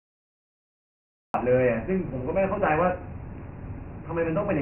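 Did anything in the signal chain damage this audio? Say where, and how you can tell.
Yes. The codec stage did the most damage. Nothing remains above 3.1 kHz, and a gritty hiss rides along with the speech throughout. That is Dialogic VOX ADPCM. Four-bit steps track the waveform coarsely, and the narrow band fits a 24 kbps, 6,000-sample rate.

The capture or storage stage also failed, with a cut-off start. The file holds digital silence until 1.34 s, then speech appears mid-sound. It has no natural attack. The recording began late, so the onset was never captured.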